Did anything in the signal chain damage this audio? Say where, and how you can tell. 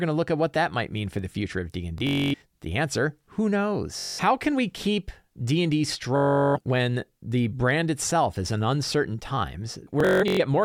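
Yes. Bluetooth stutter from the wireless link damages the audio at 1.98 to 2.42 s, after "for the future of", then at 3.99 to 4.20 s, 6.16 to 6.57 s and 10.00 to 10.40 s. Each gap repeats a short slice of sound. Packets were lost, so the receiver replayed its last buffer. Speech then resumes further on.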